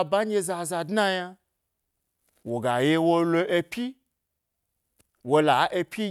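No technical faults are audible.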